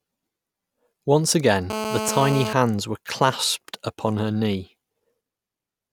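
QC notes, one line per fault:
1.70–2.53 s: GSM phone buzz. A hard, raspy buzz sits on the speech for about 0.83 s at about 217 Hz, with a dense stack of harmonics, roughly 5 dB below the speech. A 2G phone nearby transmits in bursts about 217 times a second, and the audio circuitry rectifies those radio pulses into sound. It holds steady through the span, as a phone on a call does. Mains hum, by contrast, sits at 50 or 60 Hz and sounds smoother.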